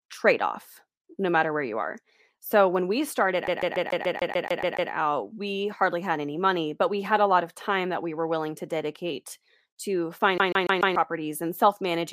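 CD stuck on one turn, from 3.47 to 4.91 s and again from 10.38 to 10.96 s: in this speech clip the laser jumps back to the same spot on each revolution, so one 144 ms slice of audio repeats with a brief mute at every jump. The first stutter, after "so when we started", loops ten times before "we hardly had any" resumes. The second, after "willing to dedicate to", loops four times, giving the fast, even skipping-disc judder.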